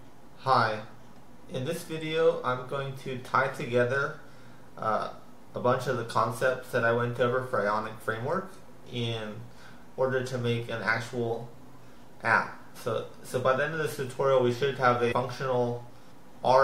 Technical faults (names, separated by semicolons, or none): compressed frames skipped